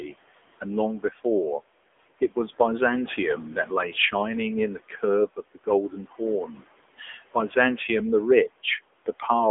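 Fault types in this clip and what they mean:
AMR narrowband mobile codec: The whole clip sounds thin, buzzy and synthetic, with plainly audible coding damage and nothing above 3.7 kHz. The speech was squeezed through the AMR-NB mobile codec at 7.95 kbps, rebuilding the voice from a vocal-tract model, over a telephone band of roughly 300 Hz to 3.5 kHz.
Speech cut by the noise suppressor: Two brief stretches, 5.36 to 5.67 s and 5.9 to 6.21 s, sound swallowed and faint, dipping by up to about 13 dB. Only a short part of each, around a tenth of a second, is affected. The noise suppressor mistook that speech for background and turned it down.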